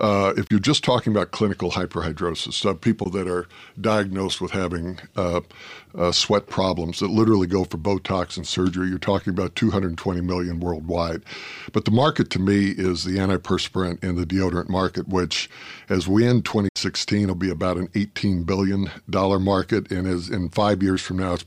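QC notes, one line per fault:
0.47–0.51 s, 3.04–3.06 s, 16.69–16.76 s: Bluetooth dropout, likely the cause of three brief holes in the speech, with roughly 27 ms, 13 ms and 67 ms of sound missing. The outputs going silent fits two, one and five wireless audio packets arriving too late to play and being discarded. Each gap has a sharp edge or a fade of a few milliseconds, and the speech comes back further along, as if it had kept playing while the output was silent.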